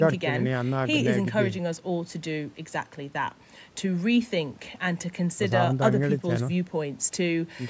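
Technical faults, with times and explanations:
No technical faults are present.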